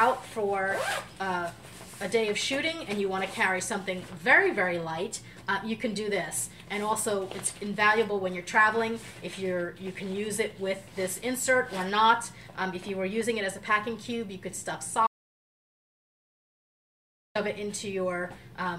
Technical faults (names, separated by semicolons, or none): audio dropout to silence